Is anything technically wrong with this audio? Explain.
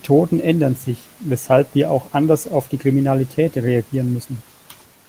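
No technical faults are audible.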